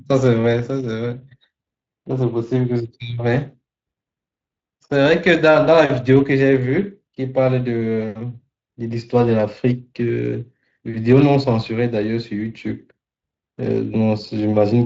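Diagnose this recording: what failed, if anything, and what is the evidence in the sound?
Codec stage: Speex codec damage runs throughout as a hoarse, noisy grain from thinly coded CELP excitation, consistent with roughly 20 kbps. On a spectrogram, harmonics blur into noise.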